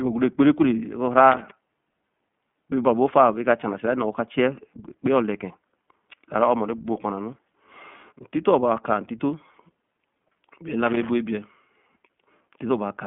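Speech with a boxed-in, telephone-like tone and a faintly rough, synthetic edge throughout. Nothing above about 3.7 kHz survives, and the useful band sits roughly between 150 Hz and 3.4 kHz. This is iLBC codec damage, and it is plainly audible. The codec squeezes the signal into a narrowband VoIP channel and codes each short frame's excitation on its own, which fits 20 ms frames at about 15.2 kbps. The low-rate coding gives the voice its grainy, slightly artificial texture. Two brief bursts of irregular scratching break in, from 1.31 to 1.51 s and again from 10.86 to 11.09 s. Each lasts about a fifth of a second. This is loose connector crackle: a worn or dirty contact in the cable or jack rapidly makes and breaks as it shifts. That chops the signal into fragments while the connection flickers.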